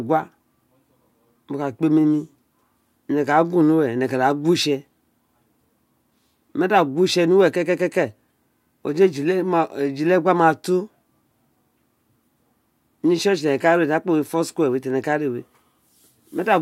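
Listening closely to the speech, nothing technical stood out at any point in the recording.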